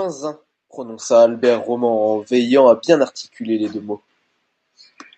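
Speech with two microphone volume stepped-up events, at 1.02 s (about 7 dB) and 4.08 s (about 4 dB), where the call software raised the input gain in one jump. Unlike a talker leaning closer, voice and background noise rise together instantly, heard through the call path's roughly 8 kHz cut-off.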